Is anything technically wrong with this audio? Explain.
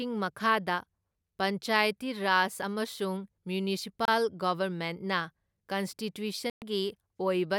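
Yes. Two Bluetooth dropouts, at 4.05–4.08 s and 6.50–6.62 s, are likely late wireless packets discarded, leaving abrupt silences of about 27 ms and 120 ms before speech resumes further on.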